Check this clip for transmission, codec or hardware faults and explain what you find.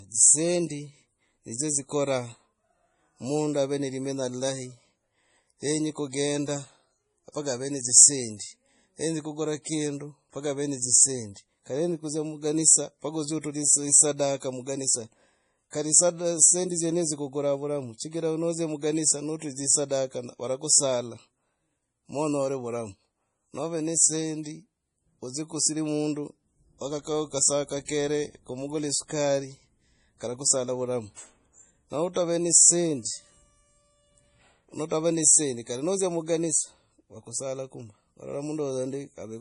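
The clip has two codec faults, one running throughout and one at three isolated attacks.

Throughout, likely MP3 compression at a bitrate around 32 kbps starves the encoder, so nothing survives above 10.5 kHz and the speech sounds dull, watery and swirly.

Pre-echo occurs at 14.40–14.42 s, at 27.85–27.89 s between "kusira mundu wakakao kasaa" and "kumugula esukari", and at 32.13–32.16 s before "ne dzisendi". Each time, the block's quantisation noise spreads backwards, putting a short hiss of 24 to 35 ms before a sharp attack.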